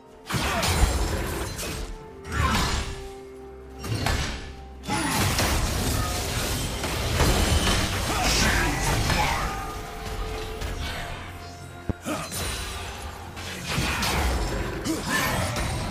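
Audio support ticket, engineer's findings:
Loud pop, 0.83–0.86 s and 11.90–11.93 s. Likely a voltage step from a plug, switch, static discharge or driver glitch entering the chain. Each is a single sharp pop, about 20 dB and about 15 dB above the audio, which continues underneath.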